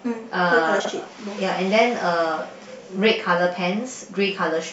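From 0.80 to 0.90 s, the speech has frames out of order. Two neighbouring runs of about 46 ms each, which fits two-frame blocks, play in swapped order. The stretch sounds like a garbled flutter. No time is lost.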